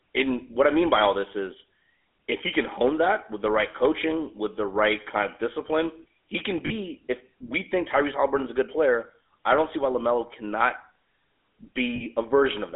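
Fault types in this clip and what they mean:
GSM full-rate codec: a plainly audible buzzy, gravelly roughness over speech confined to about 250 Hz to 3.5 kHz, from a pulse-driven vocal-tract model at 13 kbps.
lost GSM frames: two brief rough, metallic rings lasting 40 ms each, where missing frames were filled by repeating the last good frame's settings.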